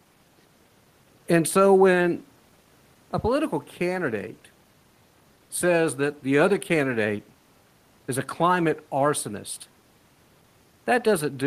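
No faults are audible in the speech; the room's background noise stays about 37 dB below the voice and belongs to the recording itself.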